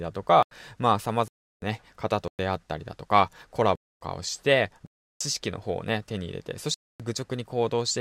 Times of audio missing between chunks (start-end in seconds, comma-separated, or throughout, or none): none